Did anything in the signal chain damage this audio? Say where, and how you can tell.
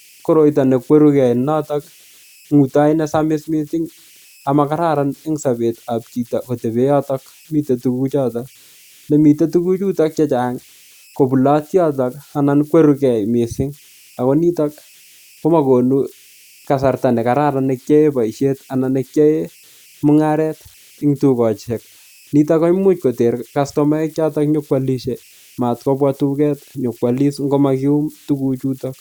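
Yes, at the converter stage. Converter idle tones run through the whole speech clip: a faint whistle near 3 kHz in the pauses, with grainy noise under quiet passages, about 32 dB below the signal. An undithered delta-sigma converter falls into repeating bit patterns on small inputs, producing these tones.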